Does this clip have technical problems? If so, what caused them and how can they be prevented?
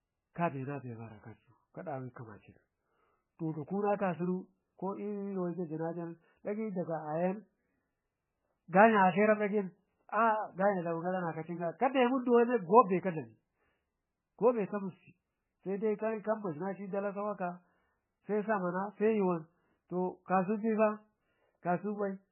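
Yes. The speech sounds watery and swirly throughout, with nothing above 3 kHz. The likely cause is heavy MP3 compression at a very low bitrate, near 9 kbps. Starved of bits, the encoder cut the treble and dropped weak detail. Encode at a much higher bitrate.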